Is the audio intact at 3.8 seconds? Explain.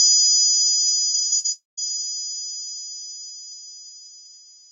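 Yes, the sound at 3.8 s is intact, with nothing beyond the ordinary coding of the Opus call path, whose band tops out around 8 kHz.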